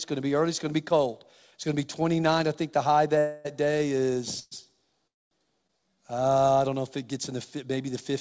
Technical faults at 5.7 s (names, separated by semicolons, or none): short stall from a late packet